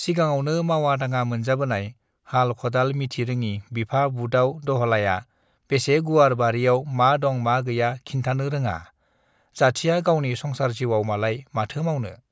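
A speech recording with no technical faults to report. Nothing in the audio calls for a time, a value or a cause.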